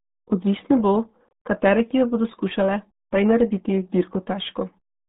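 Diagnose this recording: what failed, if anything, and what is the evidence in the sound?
Codec stage: RealAudio 14.4 codec damage throughout. The speech is muffled and gargly, and the spectrogram is blank above 3.8 kHz and smeared below, fitting an 8 kbit/s coder.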